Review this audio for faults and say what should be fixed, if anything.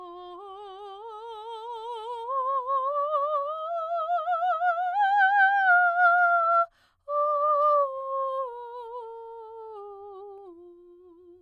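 Nothing here needs fixing.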